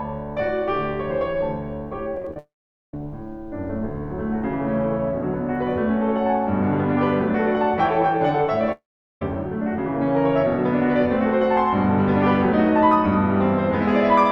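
From 2.15 to 2.36 s the music breaks up with repeated packet loss (robotic sound): seven short holes, none longer than about 16 ms, each patched by stretching the last bit of sound, so roughly 38% of that stretch is filler. It comes across as a choppy stutter. Unlike a dropout, the music keeps surfacing between the holes, and no single hole is long enough to fall silent.

Straight after, from 2.38 to 2.94 s, the audio smears into a brief fading buzz and then roughly 450 ms of silence, most likely a long network dropout. A second one, likely with the same cause, runs from 8.72 to 9.22 s with about 410 ms of silence. In both, the music returns further on with the missing part skipped. What sets these apart from the earlier packet loss is one continuous gap that ends in real silence, not a string of tiny patched holes.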